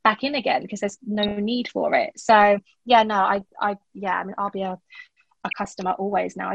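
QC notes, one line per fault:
Throughout: MP2 compression. Dull, gurgling and granular, with upper bands flickering away, likely from a low-rate MPEG Layer II encode, fitting about 80 kbps.
1.15–1.31 s, 3.36–3.56 s, 5.48–5.67 s: DAB burbling. Short blips of noise as bit errors slip into the audio data and land in single sub-bands.
2.43 s: DC step. A low thump as the waveform's zero line suddenly shifts, then drains away like a roughly 5 Hz high-pass settling back.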